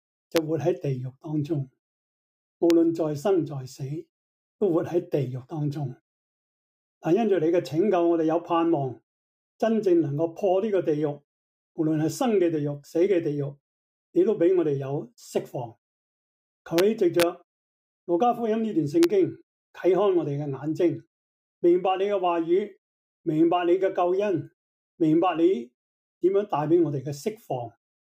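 Integer overflow wraps loud peaks to the opposite sign instead of limiting them, causing violent cracks at 0.36, 2.70, 16.78, 17.20 to 17.23 and 19.03 s, with peaks only about 0 to 1 dB over.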